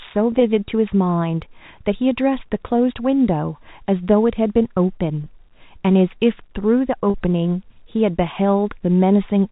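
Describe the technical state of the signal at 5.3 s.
Just before 5.3 s, from 5.24 to 5.26 s, there is packet loss with pitch repetition. About 20 ms of speech drops out, which fits one lost packet. The receiver fills the gap by repeating the last pitch period, so the sound briefly holds with a slight buzz.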